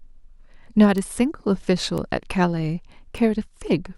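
Speech with three bit error spikes at 0.98, 1.98 and 3.18 s, peaking at about -10, -16 and -22 dBFS. Each is one or two flipped-bit samples that jump and return, giving a broadband tick with no gap, unlike a dropout.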